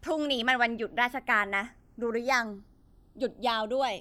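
From start to finish the channels are drifting apart. They run on separate clocks, mismatched by something like 70 ppm, so the delay between them creeps up to a fraction of a millisecond. Summed to mono, comb notches sweep slowly across the speech, heard as slow flanging.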